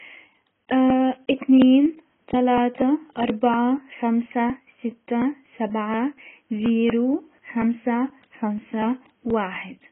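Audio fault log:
Throughout, AAC compression: nothing in the speech reaches above about 3.8 kHz, so it sounds dull and boxed-in, with sibilants turned into a fizzy, smeared hiss and sustained vowels warbling. That's likely a heavily squeezed AAC-LC encode. With so few bits per frame, the encoder drops the top band entirely and quantises the rest coarsely, leaving spectral holes that shift from frame to frame. The damage fits a bitrate down around 16 kbps.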